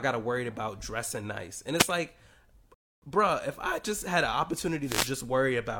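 A speech recording carries two wireless microphone noise hits and one rebuffering stall. The first noise hit runs from about 1.75 to 1.87 s, and the second from 4.82 to 5.15 s, just after "I just had an". Both are heard as a brief swish of static over the voice. The analogue FM radio link from the microphone fades as reflected paths cancel the direct signal. The receiver's own noise then rises into the audio. At 2.74 s the sound drops to silence for 0.28 s before "bruh if I just" and then picks up exactly where it left off. This is a rebuffering stall: playback ran out of downloaded audio and waited for more to arrive. No material is lost, but about 277 ms of dead air is inserted into the flow of speech.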